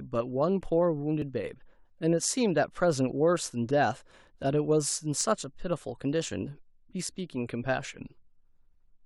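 At 1.22 s and 5.21 s, overlap between stream segments cuts a sliver of speech. The waveform jumps, giving a brief click or skip. The spacing fits 4-second segments.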